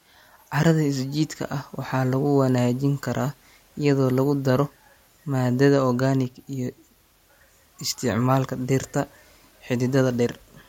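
No technical faults can be heard in this recording.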